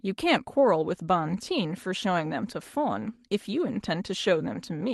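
No technical faults can be heard in this recording.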